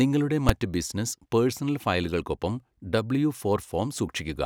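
A calculation in the processing chain produced infinite or invalid numbers, and the output was pinned at full scale for one short block, which fits a 256-sample processing block of about 5.3 ms. In this speech clip that appears as invalid numbers at full scale at 0.49 s. Because the block is so brief, the start and end pops merge into a single loud bang rather than a pop, a gap and a second pop.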